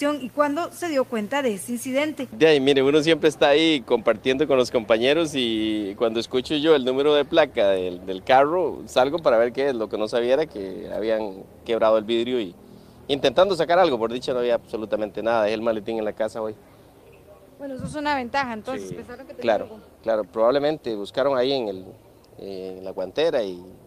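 No technical faults are audible.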